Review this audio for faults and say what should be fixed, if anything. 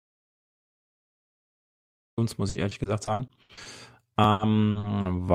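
The clip opens in an audio dropout to silence. It is already under way at 0.00 s and lasts until 2.18 s. That gap is silent, with no room tone at all. The input was likely lost, through an unplugged device, a broken link or a mute, while the recorder kept writing. Anything said in those two seconds is gone. Check connections and mute states before recording starts.

Repeated packet loss gives a robotic sound from 2.49 to 3.67 s. The speech turns choppy. Roughly ten short holes are patched by stretching the previous sound, the longest about 80 ms. About a third of that stretch is concealed. A second burst runs from 4.31 to 5.07 s, with fewer holes and about a quarter concealed. Use a steadier network link and a larger jitter buffer.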